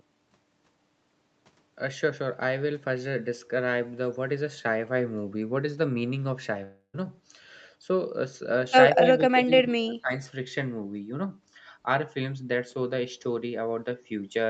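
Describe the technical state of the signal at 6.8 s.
You're right in the middle of what's most likely a long network dropout, running from about 6.63 to 6.96 s. Audio stopped arriving, so the receiver keeps the last bit of sound going as a fading, buzzy smear for roughly 0.3 s, then there's a short stretch of near silence, about 60 ms, before things pick up again. Around 300 ms of the original audio never comes back; it just skips ahead.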